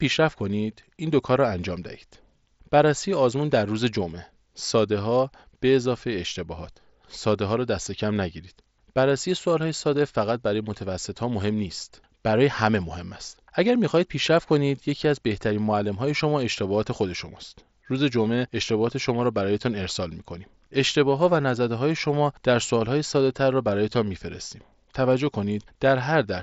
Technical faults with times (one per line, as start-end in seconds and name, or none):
none